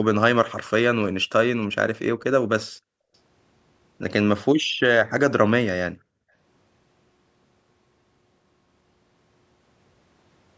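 At 2.65 to 3.13 s, 4.61 to 4.80 s and 5.92 to 6.34 s the room sound falls away by about 40 dB, then returns. This is background gated by the echo canceller, which sharply turned the microphone down while the far-end loudspeaker played.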